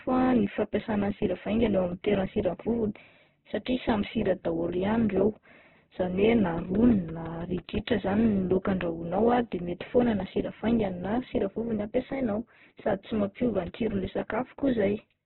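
Throughout, heavy Opus compression damage makes the speech grainy and rough, likely from a bitrate near 8 kbps; the spectrogram shows nothing above 4.1 kHz. From 6.58 to 8.26 s, a train of clicks ticks evenly at six per second: roughly ten pulses standing a few dB above the speech, seen as regularly spaced thin vertical lines and waveform spikes, likely interference or a faulty connection.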